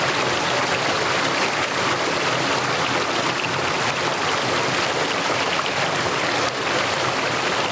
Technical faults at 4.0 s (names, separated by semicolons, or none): none